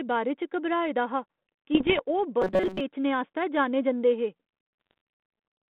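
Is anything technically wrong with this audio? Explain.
Yes. The speech travels over a 32 kbit/s G.726 ADPCM link limited to roughly 200 Hz to 3.4 kHz, and two kinds of fault show up on it.

Bit errors on an ADPCM link occur from 1.74 to 2.01 s and again from 4.81 to 4.98 s. The error rate is a fraction of a percent. ADPCM sends only differences from an adaptive prediction, so a flipped bit also corrupts the decoder's step size and predictor state. The damage therefore persists for milliseconds and is heard as pops, rough bursts and brief jumps in level.

From 2.42 to 2.81 s the speech becomes a rigid, metallic buzz at 188 Hz that still loosely tracks the speech contour. This is robotic sound from repeated short buffers, likely because new audio arrived too slowly and the playback filled the gaps by looping the last chunk. A 188 Hz repeat rate fits a buffer of about 5.3 ms. Most of that stretch is repeated material, so the real audio in between is skipped.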